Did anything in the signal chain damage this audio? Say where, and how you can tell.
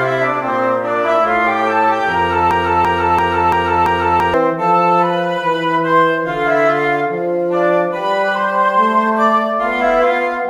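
Yes. From 2.51 to 4.34 s a 338 ms fragment repeats five times, identically and back to back: a broken-record loop. A stalled playback or stream buffer likely kept resending the last fragment it held, so the audio due in that span is lost.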